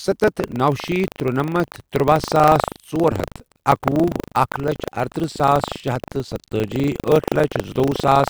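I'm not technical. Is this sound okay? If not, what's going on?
No. Buffer tearing runs throughout: a rattle 25 times a second as tiny slices of slightly earlier speech replace the current sound. Unlike hum, it vanishes in pauses.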